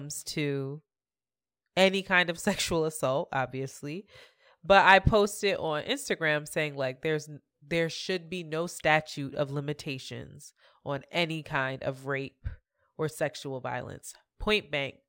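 A speech recording carrying imaging from linear upsampling for its whole length, which fits a conversion from 24 kHz to 48 kHz done by straight-line interpolation. That crude filter softens the top of the original band and leaves a faint mirrored copy, roughly 30 dB down, in the 12 kHz to 24 kHz region, heard as a light metallic shimmer on sibilants. A spectrogram would show the speech energy reflected upward around 12 kHz as a dim inverted ghost above that line.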